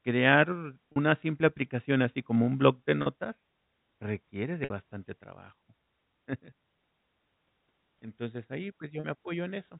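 Four short dropouts here, all packet loss with pitch repetition. At 0.92 s, just before "simple aplicación así como", then 3.02 s right after "como un block de", and 9.00 s, about 40 ms of audio is missing each time. The receiver loops the last pitch period to fill it, so you hear a brief held buzz. At 4.64 s, before "bastante trabajo", the gap is about 60 ms, long enough that the repeat starts fading out. The narrow G.711 telephone band is audible throughout.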